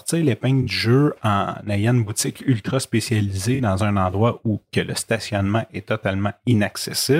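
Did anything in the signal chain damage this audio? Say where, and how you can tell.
Yes, at the codec stage: AAC frame loss with concealment. Short smeared or noisy patches occur at 0.62–0.68 s, 3.54–3.60 s and 6.51–6.54 s. The decoder rebuilt missing frames from the last good spectrum.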